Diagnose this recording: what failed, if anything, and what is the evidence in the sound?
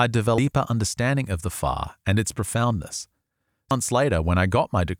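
Codec stage, damaged data in the compressed stream: the decoder misread corrupted frames and lost sync, leaving brief glitches at 0.38 s and 3.71 s.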